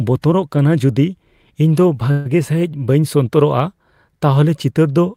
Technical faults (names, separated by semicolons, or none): call audio freeze